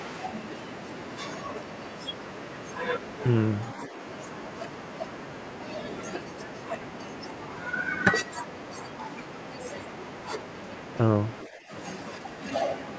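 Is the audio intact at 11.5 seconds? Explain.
No. From 11.46 to 11.71 s the speech is suppressed in double talk. The likely cause is an echo canceller that, with both sides talking at once, could not separate the near talker from the loudspeaker echo and turned everything down. The speech dips by roughly 10 dB at its deepest, losing level for about a third of a second before recovering.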